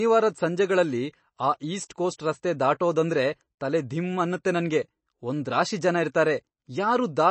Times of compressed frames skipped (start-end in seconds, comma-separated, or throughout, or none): none